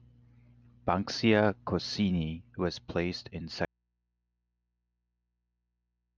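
An audio dropout to a faint residue begins at 3.65 s and runs to the end of the speech. The voice cuts out abruptly rather than fading, and what remains is a low mains hum, roughly 50 dB below the level the speech had. The likely cause is that the signal feeding the chain was lost while everything after the break stayed powered and live, so the open input picked up hum instead of falling silent.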